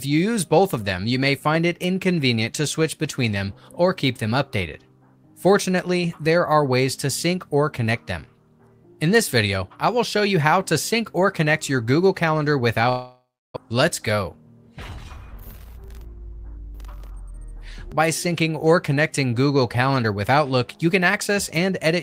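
The audio breaks up from 12.89 s to 13.67 s in what sounds like a long network dropout. The last sound is stretched into a fading buzz, and then about 310 ms of silence follows before the signal returns, with roughly 0.6 s of material never heard. The likely cause is lost packets that the receiver concealed by extrapolation and then muted. Playback resumes around 50 ms shifted in timing, skipping the missing part.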